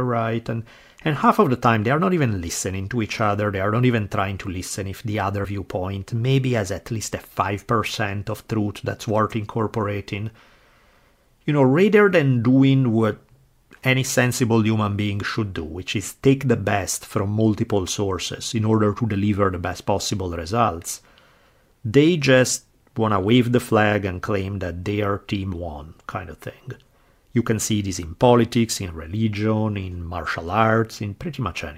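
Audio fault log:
5.44–5.46 s, compressed frames skipped: a brief jump after "to listen if the", as about 50 ms of audio vanishes. Whole compressed frames were missing or rejected.
16.42 s, compressed frames skipped: a short hiccup after "should do which is", jumping ahead by about 20 ms, because whole frames went undecoded.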